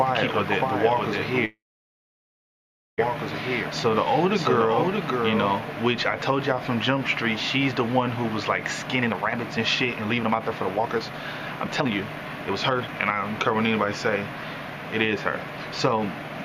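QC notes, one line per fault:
0.00–5.58 s, doubled audio track: a full-band copy trails the sound by about 0.7 s at about 5 dB lower, with no decay or room colour, and cuts off abruptly at 5.58 s. It is likely a second, slower capture path. On a spectrogram every event appears twice, shifted right.
1.45–3.00 s, call audio freeze: the sound halts, the last fragment drags on as a brief fading buzz, then about 1.4 s of silence follows. Playback resumes exactly where it stopped, so the audio falls about 1.5 s behind. The likely cause is delayed packets emptying the jitter buffer. The waveform shows a flat gap.
8.95–11.14 s, 11.64–12.01 s, 12.49–13.73 s, jitter buffer speed-up: the sound runs hurried at the same pitch, at 143%, 148% and 121% speed. Repeated pitch-period-sized slices are cut to shed the backlog, roughly 1.5 s in total. Spectrogram events appear compressed in time, with harmonics unchanged.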